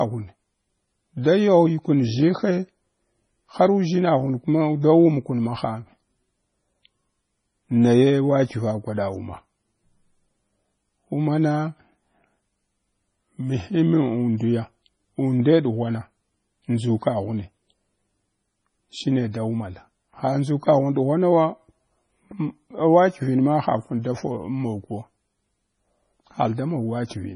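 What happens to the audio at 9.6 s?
At 9.6 s the speech carries the same damage heard through the whole clip, most likely from heavy MP3 compression. Nothing sounds above 10.5 kHz, and the quieter frequency detail flickers in and out from frame to frame as the encoder runs short of bits, giving a watery, swirling texture with chirpy s sounds and smeared consonant attacks. That points to a very low bitrate, around 24 kbps. A simple low-pass filter would dull the top without that swirl.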